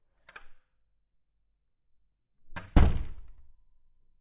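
No technical faults occur at any point in the sound.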